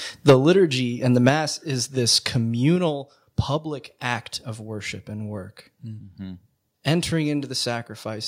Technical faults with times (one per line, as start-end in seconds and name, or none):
0.28-0.33 microphone overload
0.30 microphone volume stepped down
1.29 microphone volume stepped down
2.76 microphone volume stepped down
7.38 microphone volume stepped down